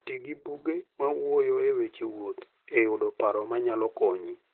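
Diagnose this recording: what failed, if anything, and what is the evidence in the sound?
The failure is at the codec stage: Opus voice compression, running in its SILK linear-prediction mode, affects the speech for its whole length. Nothing is audible above about 4.2 kHz, so the codec has dropped to narrowband. The heavy coarseness and slightly robotic, hoarse texture point to a very low bitrate, likely around 8 kbps. At that rate the excitation is quantised so roughly that detail collapses on every 20 ms frame.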